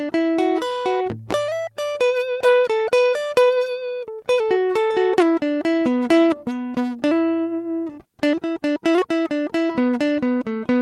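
No audible technical faults here.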